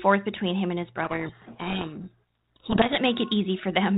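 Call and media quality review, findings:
Codec payload misread, 1.04 to 2.97 s. Speech buried in harsh, gritty distortion for about 1.9 s, then normal. Probable component: G.726 packing at sender or receiver. Mechanism: sides disagree on bit order within each code word, so the decoder applies wrong prediction differences. Surrounding G.726 path at 32 kbit/s: band-limited below 4 kHz, light codec noise only.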